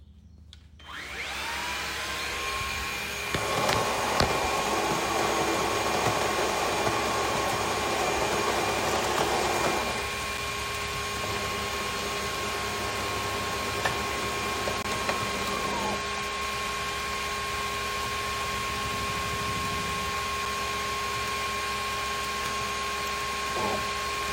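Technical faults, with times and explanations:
14.83 to 14.85 s, block of digital silence: The audio drops to silence for 20 ms, then returns. There is no fade in or out. The waveform jumps straight to silence and straight back. At this length the gap is heard as a short hole. The cause is a block of samples replaced by zeros, such as an output buffer that was not filled in time.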